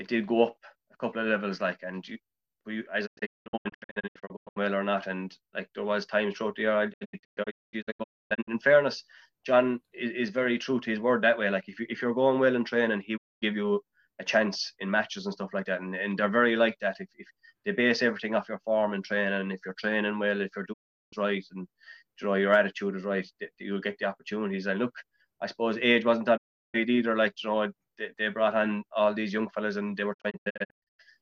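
Digital broadcast dropout mutes the audio at 3.05–4.58, 6.92–8.49, 13.16–13.44, 20.72–21.14, 26.36–26.76 and 30.13–31.03 s. Each hole begins with a quick fade of about 20 ms, and the longer ones break into scattered short gaps. This points to a receiver muting on failed frames rather than a hard edit or tape dropout.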